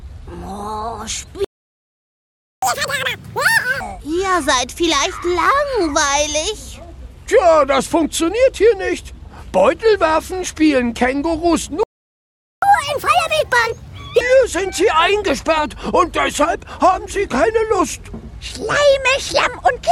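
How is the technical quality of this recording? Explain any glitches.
The recording is marred by two playback stalls, each followed by a catch-up at higher speed.

The first playback stall runs from 1.44 to 2.62 s, and the second from 11.83 to 12.62 s. The sound halts abruptly for 1.18 s and then 0.79 s. The likely cause is the player running short of buffered data or having its audio thread blocked. On a waveform, each stall is a flat, empty stretch. On a spectrogram, it is a blank vertical band with hard edges.

Each stall is followed at once by a catch-up at higher speed. From 2.62 to 3.80 s the audio plays at 2× speed, raised about ten semitones. From 12.62 to 14.21 s it plays at 1.5× speed, about seven semitones higher. The player is resampling its backlog to recover the lost time, which makes the sound hurried and chipmunk-like until it drops back to normal. On a spectrogram, the harmonics shift upward and sit further apart. 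On a waveform, the envelope details are compressed in time.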